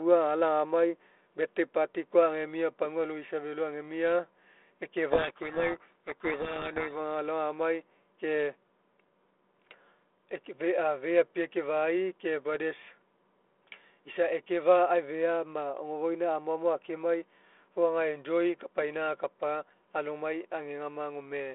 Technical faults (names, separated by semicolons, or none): codec payload misread